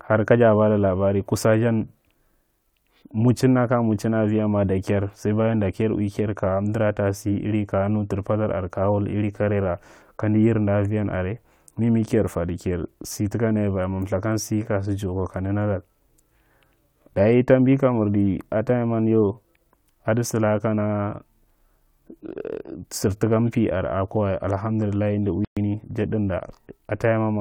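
A playback stall hits this speech at 25.45 s and lasts until 25.57 s. The output drops to silence for about 120 ms, cutting the talker off mid-flow before the sound resumes. The likely cause is the player running short of buffered data, or its audio thread being held up, so it had nothing to send to the output until the supply recovered. The gap is short but clearly audible as a hole in the sentence.

Time-compressed catch-up follows at once, from 25.57 s to 25.69 s, running at 2× speed. To shed the backlog built up during the silence, the player discards short slices of audio and cross-fades the remaining pieces together. Pitch stays where it was, but the speech comes out hurried before normal pacing returns.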